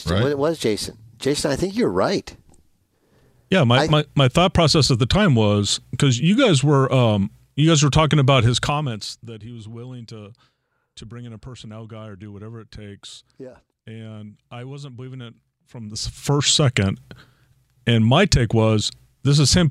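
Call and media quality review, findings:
Zipper noise: 8.44–9.38 s after "guys were talking about", about 20 dB cut; 15.71–16.41 s after "I wasn't believing it", about 20 dB rise. Ticking around 100 per second. Gain stepped per buffer, unsmoothed. Staircase waveform envelope, evenly spaced vertical broadband lines on the spectrogram.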